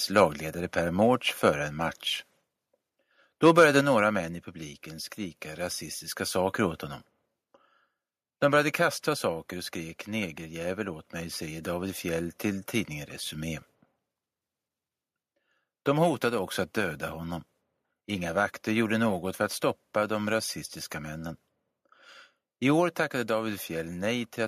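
At 0.17 to 0.20 s and again at 3.45 to 3.64 s, the loudest peaks flatten and crackle harshly. This is microphone overload. The likely cause is an input set too high, driving peaks about 3 dB and about 4 dB past the converter's ceiling. A few percent of samples are clipped.

At 3.81 s, just before "några män i publiken", the level drops by about 5 dB in one step. This is microphone volume stepped down. It likely comes from call software cutting input gain after that distorted peak. Smaller drops follow at 9.09 s, about 1 dB, before "saker och skrek negerjävel", and at 23.07 s, about 2 dB.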